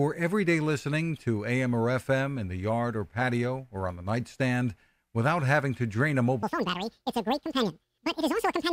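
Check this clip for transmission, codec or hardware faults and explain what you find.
One fault: from 6.43 s to the end, the audio read two samples at a time (double speed). Each pair of samples is taken as one frame, so the speech plays twice as fast and an octave higher.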